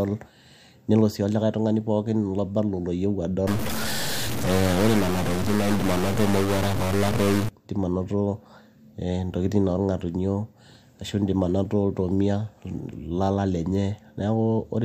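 From 3.47 s to 7.49 s the speech turns harsh and buzzy, and any gaps in that stretch fill with a gritty noise bed instead of going quiet. That's the signature of a stuck bit, likely one data line or converter bit jammed high or low. About half the samples end up shifted by that bit's weight, a fairly big step of around -20 dBFS, so the error tracks the waveform and flips with the sign of small values, which is why the pauses get noisy.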